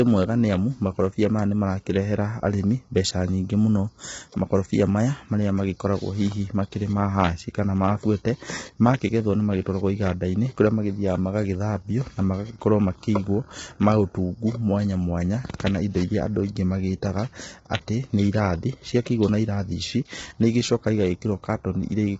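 Across the whole of the speech, the sound is rough and grainy, with heavy coding damage: noise fills the gaps between the pitch harmonics, and nothing is present above 7.8 kHz, so the top band ends abruptly. The likely cause is low-delay AAC compression, AAC-ELD as used in video calls, at a bitrate that points to about 16 kbps. Its short frames resolve harmonics coarsely and leave too few bits to code the spectrum cleanly.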